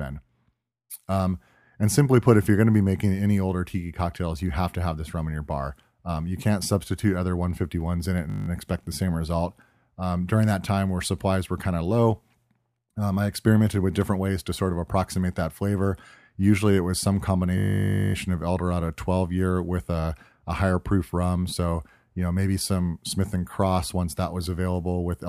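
At 8.3 s, after "in it and", and at 17.58 s, after "it was some", a system hang loop repeats one 20 ms slice at 50 Hz, buzzing for 0.18 s and then 0.56 s. The waveform shows identical repeating cycles, and the spectrogram shows harmonic stripes spaced 50 Hz apart.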